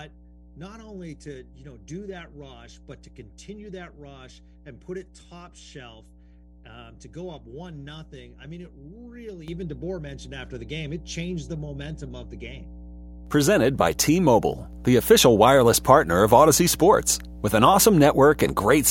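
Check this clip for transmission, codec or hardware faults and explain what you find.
Two faults stand out: a mains hum running through the whole recording, and a single jump in microphone level partway through.

Mains hum is present from start to finish: a steady, low 60 Hz drone sits under the speech, quite prominent at roughly 10 dB below the signal, with low harmonics above it. The tone never drifts or pauses, which points to the power line coupling into the signal path, most plausibly through a ground loop between connected equipment or a transformer sitting close to the microphone or its cabling.

A microphone volume step-up occurs at 9.48 s, when the speech and the background jump together by about 8 dB in an instant. Because everything rises at once, this is a change in input gain rather than the talker getting louder. It is the behaviour of call software judging the microphone too quiet and raising the device's input volume in one abrupt step.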